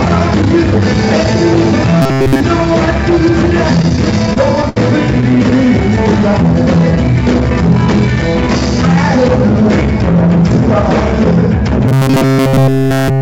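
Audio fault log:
2.02–2.41 s, robotic sound from repeated short buffers: the sound turns into a rigid metallic buzz at 134 Hz across most of this span. That pitch matches a snippet about 7.5 ms long played over and over. The likely cause is audio arriving too seldom, so the receiver loops its last short buffer and skips the real signal.
3.82–4.77 s, repeated stalls (stutter): eleven brief hitches, the longest 70 ms, adding up to 192 ms of filled time. Nothing is lost. The jitter buffer keeps running dry and stretches the last sound until late audio arrives, so the passage drags.
5.21–5.67 s, repeated stalls (stutter): seven shorter hitches, none over 16 ms, totalling 70 ms. The effect is a lighter flutter with no audio missing.
11.88–13.22 s, robotic sound from repeated short buffers: the same 134 Hz buzz returns and covers nearly the whole stretch to the end. The sound keeps only a rough outline under the fixed metallic tone.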